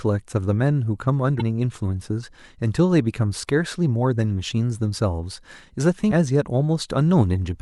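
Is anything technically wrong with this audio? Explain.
Yes. Two brief blips break into the speech, one from 1.37 to 1.41 s and another, shorter one at 6.1 s, each unlike anything around it. This is damaged data in a compressed stream: some of the coded bytes at those points are wrong, so the decoder misreads those frames, loses its place in the stream, and emits garbled sound until it locks onto the next valid frame header.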